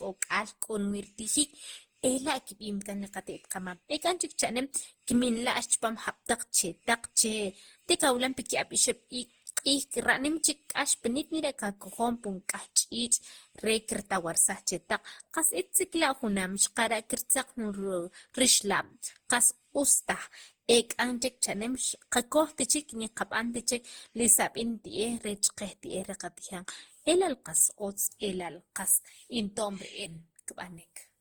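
From start to finish the speech carries generation loss: a swirly, smeared, hollow quality heavier than a single lossy encode would give, with consonant onsets blurred. The character fits Opus at around 48 kbit/s, likely decoded and re-encoded about seven times. Each pass requantised on a shifted frame grid, so noise piled up rather than staying at one pass's level. The band still extends to 20.1 kHz.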